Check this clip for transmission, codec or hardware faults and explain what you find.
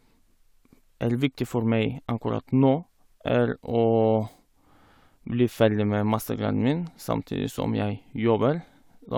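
Nothing in the speech points to a transmission, codec or hardware fault; the signal holds steady throughout, with no audible interruptions or disturbances.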